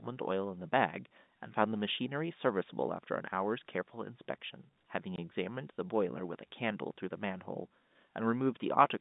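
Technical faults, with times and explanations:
5.16 s: packet loss filled with silence. A single packet of audio failed to arrive, and the receiver substituted nothing in its place, so the speech drops out for 20 ms, which fits one lost 20 ms packet. The gap has hard edges because the waveform is cut abruptly to silence and then resumes. It runs under the G.711 telephone coding, whose narrow band of roughly 150 Hz to 3.7 kHz is audible throughout.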